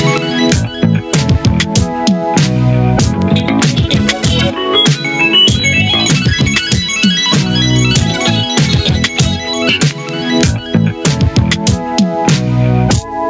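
Gain pumping runs throughout: the gain swings by around 15 dB, likely a limiter fighting excessive gain; the waveform envelope looks flattened and breathing. From 7.04 s to the end, sample clock jitter adds hiss about 30 dB below the signal, tracking loud, bright passages; the spectrogram shows broadband fuzz under strong content up to the 8 kHz ceiling, absent in silences.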